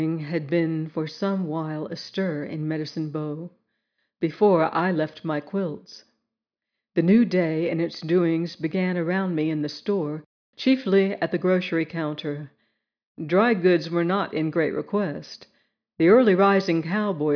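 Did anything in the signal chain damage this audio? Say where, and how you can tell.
No, there is no audible sign of damage from any stage of the signal chain.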